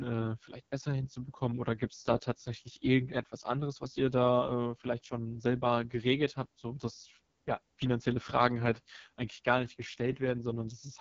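Speech that sounds rough and raspy throughout, with nothing above about 7.2 kHz. This is AMR wideband (HD Voice) codec damage, heavy enough to suggest one of its lowest bitrates, near 6.6 kbit/s.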